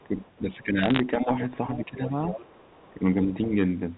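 From 0.0 to 0.63 s a very faint second voice sits far beneath the speech, roughly 35 dB down. This is the other side's voice leaking through, most likely loudspeaker playback that the echo canceller failed to remove entirely from the microphone. Overlapping it, from 0.08 to 2.19 s, the speech repeatedly sinks by as much as about 10 dB, for around a second in total. That is speech suppressed in double talk. The likely cause is both parties talking at once, with the canceller unable to separate its own talker from the echo and so ducking everything.

From 0.79 to 1.0 s a scatter of sharp ticks and brief crackle cuts across the speech. These are bit errors on a digital phone line. On the 64 kbps mu-law G.711 link, a fraction of a percent of bits were flipped, and each flip corrupts one sample. Hits on the sign or high bits produce the loudest clicks.

The leak returns much stronger, around 15 dB below the speech, as a short scrap at 1.71 to 1.84 s and a longer stretch at 2.29 to 2.93 s. 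It likely comes from the same incomplete echo cancellation. From 2.91 to 3.53 s the speech is ducked again, by up to about 10 dB for roughly 0.4 s, likely from the same double-talk suppression. Inside that dip, at 3.28 to 3.33 s, a brief fragment of the far voice, around 25 dB down, slips through, likely from residual echo once more.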